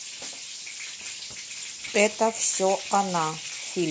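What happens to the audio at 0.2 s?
At 0.2 s the speech sounds rough and grainy, with noise filling the gaps between harmonics, as it does for the whole clip. The likely cause is low-delay AAC compression, whose short frames resolve pitch harmonics poorly at a rate that fits about 32 kb/s.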